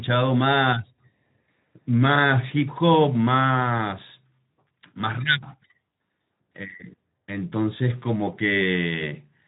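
Nothing stood out as a fault on listening to this speech, which comes through a Speex codec path working as intended.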